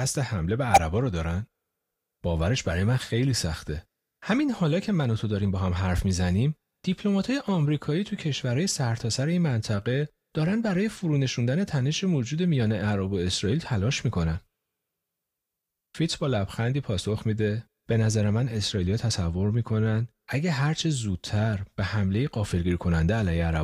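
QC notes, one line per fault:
0.73–0.78 s, corrupt frame decoded: a sharp, chirpy burst of noise peaking at about -10 dBFS cuts across the speech for roughly 55 ms. Bit errors in what sounds like two consecutive compressed frames were decoded anyway, so misread gains and codes threw energy into the wrong frequencies.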